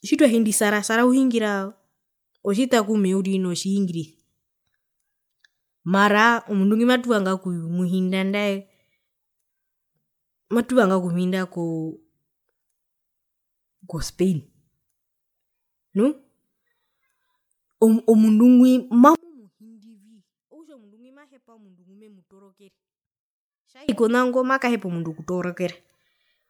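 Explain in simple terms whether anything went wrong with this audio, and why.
Two things went wrong. The whole clip sounds swirly and hollow, with blurred edges, likely generation loss from being re-saved as MP3 several times over. From 19.15 to 23.89 s, just before "konago makahepa omundu", the speech nearly disappears when played in mono, likely from one channel being inverted and cancelling the other.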